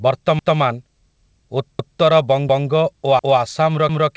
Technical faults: overlapping chunks

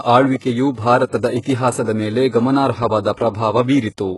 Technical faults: HE-AAC compression

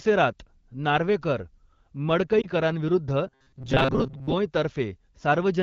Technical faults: lost AMR speech frames; robotic sound from repeated short buffers

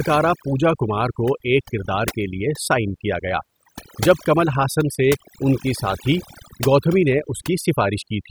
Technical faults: overdone noise removal

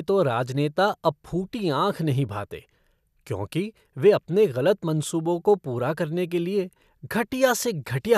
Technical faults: none

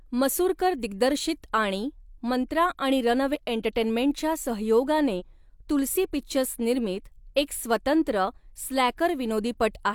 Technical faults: compressed frames skipped

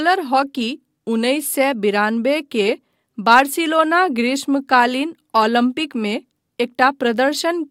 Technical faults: clock slip clicks

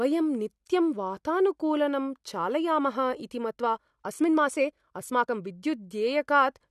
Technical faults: time-stretched section

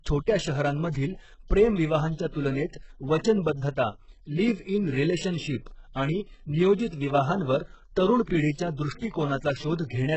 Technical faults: HE-AAC compression

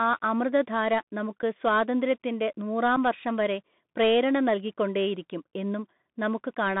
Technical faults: Bluetooth CVSD headset codec; unconcealed Bluetooth headset packet loss

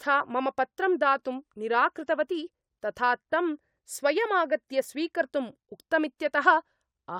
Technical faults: none

